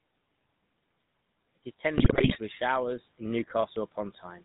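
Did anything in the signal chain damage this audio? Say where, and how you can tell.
Yes. At the codec stage, the whole clip went through GSM full-rate coding, which fits a 13 kbps rate. Its pulse-driven vocal-tract model throws away most excitation detail and nothing gets through above 4 kHz, so the speech is band-limited, buzzy and gravelly throughout.

On the network link, GSM bit errors hit from 1.96 to 2.38 s, just before "with showers in". Corrupted filter, pitch and gain values reached the decoder, so frames came out with distorted spectra and level jumps, and the speech breaks into squawks and gargling there.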